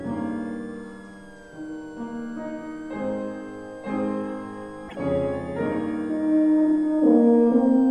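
From start to end a switching supply whistle sits about 30 dB below the sound, a thin tone wandering between 1.48 and 1.77 kHz. A power converter cycling in an audible range causes it. A spectrogram shows it as a faint, slightly wavering horizontal line near 1.5 kHz.

At 4.87 to 4.96 s a short glitch interrupts the audio, which then jumps ahead. This is likely a broken MP3 bit reservoir: after missing frames, the decoder borrowed bytes from the wrong frame. The glitch spans about three 26 ms frames.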